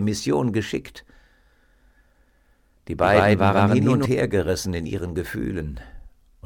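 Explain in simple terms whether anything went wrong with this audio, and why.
From 3.02 to 4.06 s the sound is heard twice, with a second, equally loud copy trailing about 0.15 of a second behind and then cutting off abruptly. This doubled audio track was likely caused by the sound being recorded again through a slower path.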